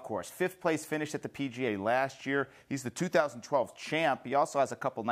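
From 1.68 s to 3.65 s the audio slows by about 5.6% and drops roughly a semitone in pitch, then snaps back to normal rate. The likely cause is a drift correction step, where clock-matching software abruptly changed the playback rate to rebalance its buffer.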